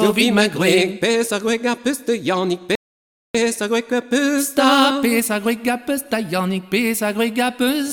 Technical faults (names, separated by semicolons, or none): rebuffering stall